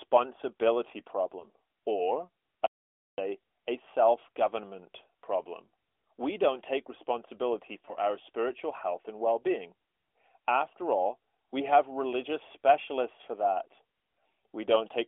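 At 1.40 to 1.45 s and again at 7.86 to 7.95 s, between "don't take responsibility" and "our spiritual health and", lost AMR speech frames force concealment, which fits a single dropped 20 ms frame each time, heard as a brief dip or warble. From 2.66 to 3.18 s the input likely cut out and silence was written, so about half a second drops to total silence before "a self government problem". All of this is heard through light narrowband mobile-codec coloration.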